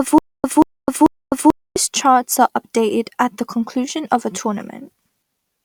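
A speech recording that opens mid-stutter: from 0.0 to 1.76 s a 0.18 s burst repeats three times, each followed by 0.26 s of dead digital silence, every 0.44 s, before normal playback resumes at "charts are updated at". This stutter with silent gaps likely comes from a stalled stream replaying its last fragment on each retry, losing the audio that belonged there.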